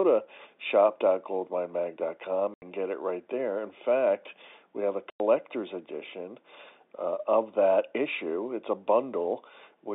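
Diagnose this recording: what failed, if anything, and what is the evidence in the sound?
The network stage failed: packet loss filled with silence. The speech drops to dead silence from 2.54 to 2.62 s, just before "get it right there", and again from 5.1 to 5.2 s, right after "fact we have a". The 80 ms and 100 ms gaps are whole multiples of 20 ms, which points to lost 20 ms packets over the telephone-band G.711 link. Unlike concealment, nothing is patched in, and both edges cut off abruptly.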